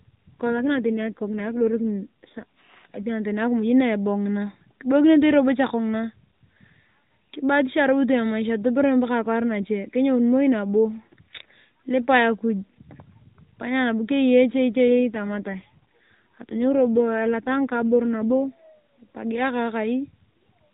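Two AMR rate drops: from 0.55 to 2.44 s, then 14.88 to 18.72 s, just before "epagia akaa". The weak link pushes the codec down, roughly 12.2 to 5.9 kbps by the sound, so the speech turns buzzy and synthetic, same narrow band, no gap.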